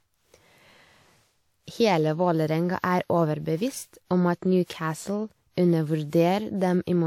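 Generation loss runs throughout the speech: a swirly, hollow smear, blurred consonant attacks, and nothing above 18.2 kHz. The likely cause is about four rounds of lossy re-encoding, consistent with WMA near 96 kbit/s, each pass requantising on a shifted frame grid.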